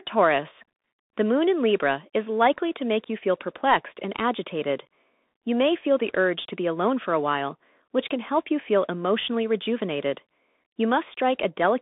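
Speech runs through a Bluetooth CVSD headset codec for its full length: band-limited to about 200 Hz–3.6 kHz, with a granular hiss and scratchy, slope-overloaded sibilants consistent with 64 kbps delta modulation.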